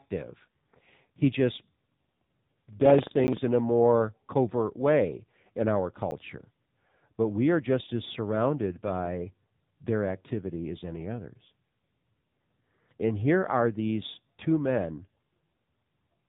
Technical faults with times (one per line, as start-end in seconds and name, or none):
0.00-16.29 AMR narrowband mobile codec
3.27 block of digital silence
6.11 block of digital silence